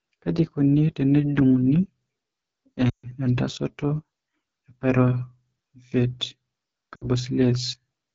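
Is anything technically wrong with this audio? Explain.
Yes, there are two problems. The whole clip has been through the AMR wideband (HD Voice) codec at one of its low rates. The speech has a rough, raspy edge that's plainly audible, which fits the 8.85 kbit/s mode. At that rate the codec models the vocal tract and drives it with a sparse pulse pattern up to 6.4 kHz, then fills the band above that with shaped noise. There are so few bits that the voice loses its smoothness.

There are also lost AMR speech frames in two places. From 2.89 to 3.11 s there's a gap of about 140 ms, which points to a run of around seven frames failing. The decoder keeps replaying the last good pitch and vocal tract settings while turning the gain down. You hear the sound drop to near silence within a couple of frames, as wideband does, before the speech comes back a bit weak. At 6.96 to 7.06 s a shorter hole, about 60 ms and likely three frames, gives a brief drop to near silence.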